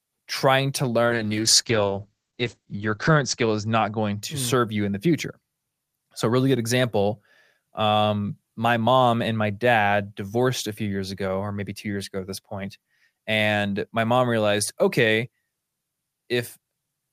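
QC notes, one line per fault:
1.07–4.43 s, call bitrate drop: the audio turns coarse and muffled, and for about 1.8 s it sounds as if the encoder has fallen to roughly 9 kbps from 32. A spectrogram shows the top edge falling from 20 kHz to an 8 kHz ceiling, with smeared, blotchy detail below it.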